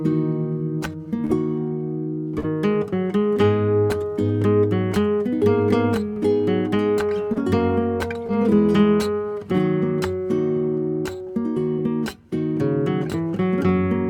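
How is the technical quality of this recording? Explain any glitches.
The recording is marred by five instances of short concealed packet loss, at 1.25–1.31, 2.39–2.45, 6.13–6.18, 7.34–7.37 and 8.27–8.30 s. Each time, 40 ms (first two) or 20 ms (last three) of audio arrived too late to decode. The receiver covered the gap by extending the preceding sound, from its pitch or as shaped noise, for about 11 to 43 ms before blending back. Each one is audible as a brief smear or wobble.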